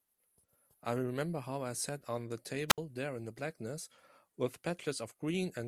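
At 2.68 s a wireless microphone squelch dropout occurs: hiss swells briefly, then the receiver mutes for about 65 ms, unlike a clean digital gap, before speech resumes by 2.78 s.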